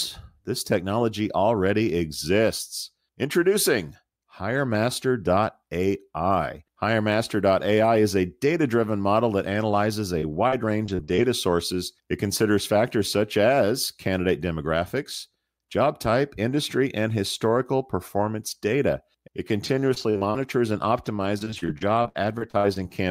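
Repeated packet loss (robotic sound) hits at 10.19–11.24 s and again at 19.64–22.92 s. Brief dropouts, up to 62 ms, are each patched by stretching the previous sound, leaving the speech choppy.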